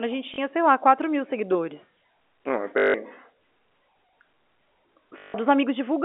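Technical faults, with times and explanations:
0.34–0.38 s, packet loss with last packet repeated: between "a gente" and "sei lá", 40 ms of sound is filled by replaying the previous fragment, giving a brief stutter. The waveform shows a copied segment.
2.78–2.94 s, packet loss with last packet repeated: a 160 ms gap is filled by one short fragment looping, likely every 20 ms, so it buzzes near 50 Hz and sounds robotic. The spectrogram shows a frozen spectrum, limited to the telephone band.
5.18–5.34 s, packet loss with last packet repeated: another 160 ms loop with the same 50 Hz buzz and the same frozen spectrogram pattern.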